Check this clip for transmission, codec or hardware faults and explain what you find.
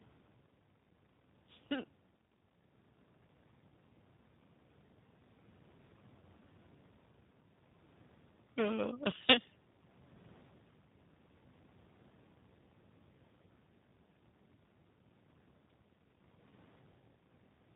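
Two problems here: the whole clip has been through a low-rate speech codec, and there are two short dropouts that the decoder papered over.

The codec is G.729, and the coding damage is plainly audible from start to finish. The character fits the 8 kbit/s G.729A variant. The codec models each stretch of speech as a vocal tract filter plus a pitch predictor and a sparse handful of pulses, so nothing above 4 kHz survives. The voice comes out dull, slightly rough and a bit synthetic, though it stays intelligible.

The other fault is VoIP packet loss concealed by the speech codec, at about 6.2 s and again from 16.49 to 16.51 s. Each gap is about 20 ms, which fits a single lost packet. With nothing to decode, the receiver kept extending its last pitch and filter settings while turning the level down. You hear a brief buzzy or smeared patch, and the speech takes a moment to firm up again after each one because every frame builds on the one before.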